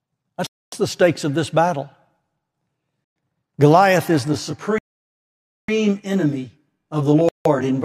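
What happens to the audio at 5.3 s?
At 5.3 s the sound is cut to silence. The gap runs from 4.78 s to 5.68 s, about 900 ms. This is likely a Bluetooth stall: the headphones' buffer ran empty while delayed packets were resent. Playback then resumes.

Around that gap, a channel delay causes comb filtering from 4.28 s to the end of the clip. One channel lags by roughly 20 ms. The mono sum cancels at evenly spaced frequencies from about 30 Hz upward. The speech sounds rough and slightly doubled.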